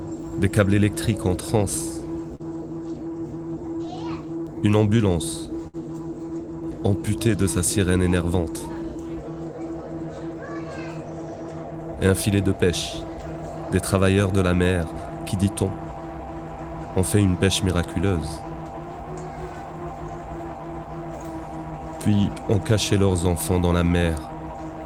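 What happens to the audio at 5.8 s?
A short stall from a late packet runs from 5.67 to 5.76 s. A packet arrived late, the jitter buffer ran dry, and the receiver held the last sound for about 62 ms before resuming where it left off. Nothing is lost, but the sound lingers with a faint buzz or dip.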